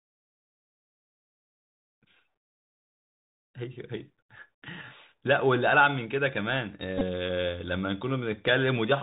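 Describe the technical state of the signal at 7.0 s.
At 7.0 s the speech passes through a Bluetooth CVSD headset codec. The whole clip shows it. The codec sends one bit per step, up or down, and adapts its step size. This fits a 64 kbps headset link. Nothing above 4 kHz survives, so the sound is narrow and boxed in. Fast, loud high energy outruns the step and distorts. S sounds turn scratchy. A granular hiss sits under everything. Here the damage is plainly audible.

From 6.98 s to 7.03 s there is a Bluetooth headset packet repeated fault. Voice packets between headset and phone went missing. The chip decoded the previous packet's bits again in their place. About 22.5 ms of audio is lost, scattered over 30 ms, which points to several dropped packets. The longest unbroken run is about 10 ms. Within those runs the repeat comes every 3.75 ms, giving a brief buzz near 267 Hz.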